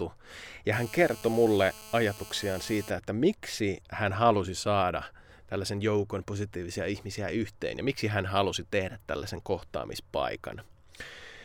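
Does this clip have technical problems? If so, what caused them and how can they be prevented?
Yes. From 0.73 to 2.91 s, just before "että miksi hän halusi", there's GSM phone buzz, a raspy 217 Hz drone full of harmonics, about 18 dB below the speech. A nearby phone on a call had its radio bursts rectified by the audio circuitry. Keep phones in flight mode or well away from the gear.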